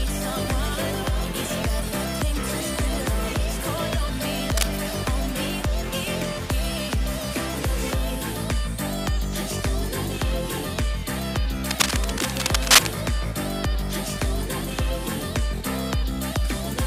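Cable scratch noise at 4.51 to 4.68 s, about as loud as the audio, and again at 11.66 to 12.96 s, rising above it: dense, uneven rustling bursts, likely from a worn connector being moved. Unlike isolated digital clicks, it's a cluttered, grainy scrape.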